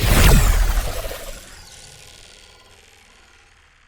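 At 0.87 s, compressed frames are skipped. The audio jumps ahead about a tenth of a second, consistent with several 10 ms frames lost.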